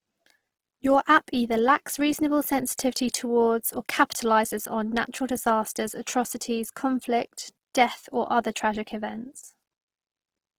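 From start to end the speech sounds rough and grainy, with a noisy, fizzing texture in place of clean harmonics, though the audio still extends up to about 20.4 kHz. This is likely Opus compression in its music (CELT) mode. Short of bits, the encoder keeps each band's energy but refills the detail with folded or noise-like content, so the damage is plainly audible. The degree of grit fits a rate around 16 kbps.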